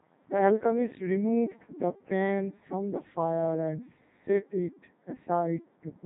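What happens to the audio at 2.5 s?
At 2.5 s, as across the whole clip, the speech has passed through a Codec 2 vocoder. Only pitch, voicing, energy and a spectral envelope survive, which fits the 3.2 kbit/s mode. Sine-wave resynthesis replaces the true waveform, leaving heavily robotic, buzzy speech with nothing above 3.8 kHz.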